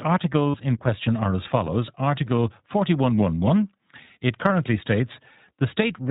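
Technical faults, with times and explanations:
Throughout: iLBC codec. The speech is confined to the narrowband telephone range, with nothing above 4 kHz, so sibilants and breath lose their edge. Each short frame is coded on its own, giving the voice a plainly audible roughness and a slightly synthetic grain. The character fits 20 ms iLBC frames at around 15 kbps, where the coarse coding of the excitation is what roughens the sound.
0.50–0.56 s, 2.36–2.38 s and 4.48–4.51 s: lost iLBC frames. Each gap is bridged by a short, held, faintly buzzy vowel-like tone instead of silence. The first gap, about 40 ms, comes just before "in question are as", and the second, about 20 ms, just after "question are as follows". The decoder repeats the last pitch cycle blended with noise to fill the missing frames. Because the next frame decodes independently, the voice snaps back cleanly at once.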